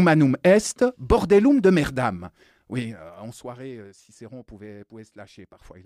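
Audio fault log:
2.78 to 3.7 s, zipper noise: a gain reduction of roughly 15 dB was applied in discrete jumps, around 50 a second, rather than ramped, which points to the level being updated once per audio buffer of about 20 ms. Each jump is an instant discontinuity in the speech waveform, producing a small click, so the fade carries a fast ticking, zipping texture for just under a second.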